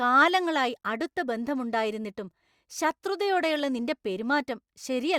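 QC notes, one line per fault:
No faults heard anywhere in this speech recording.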